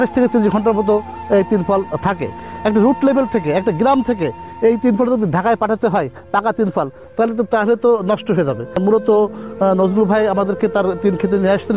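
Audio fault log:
No faults detected in this clip.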